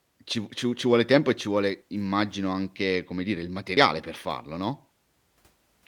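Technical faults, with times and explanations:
3.77 s, audio missing between chunks: a skip of about 50 ms between "anche come dire il" and "per farlo", likely lost at a 2-second chunk boundary.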